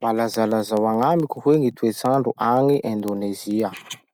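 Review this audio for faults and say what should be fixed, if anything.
Word clock ticks: the receiving device's unlocked clock drifts a few hundred ppm from the sender's and slips one sample about every tenth of a second, ticking from 0.17 to 4.11 s. To prevent it, lock the receiver to the sending device's word clock or put a sample-rate converter at the digital input.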